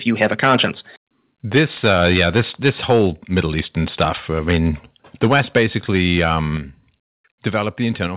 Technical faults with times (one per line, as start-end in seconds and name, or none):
0.08-0.66 microphone overload
1.55-3.07 microphone overload
1.58 microphone volume stepped down
3.36-3.61 microphone overload
4.00-4.09 microphone overload
4.48-4.69 microphone overload
5.23-6.38 microphone overload
5.58 microphone volume stepped down
6.57 microphone volume stepped down
8.07 microphone volume stepped down